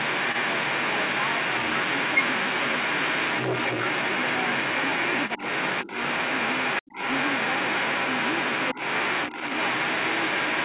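From the first moment to the very end, a second voice runs over the talker. It is the other side's voice leaking through, and it sits roughly 10 dB above the talker's own speech. The likely cause is the far end playing on a loudspeaker, with the echo canceller failing to strip it from the microphone. Both voices stop at 4 kHz, which fits a G.711 telephone codec.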